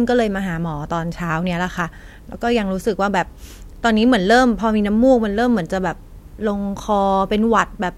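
A recording of speech, with no technical fault to report. Nothing in the audio calls for a time or a cause.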